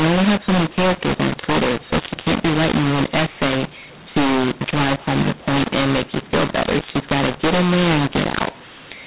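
Harsh, gritty distortion runs through the whole of this speech recording, with levels scrambled unevenly so that some samples come out too large and others too small, and the gaps between phrases filling with a hiss instead of falling silent. The speech sits inside its 4 kHz telephone band. This is the mu-law and A-law mix-up: the audio was encoded with G.711 mu-law but decoded as A-law, so every 8-bit code maps to the wrong level.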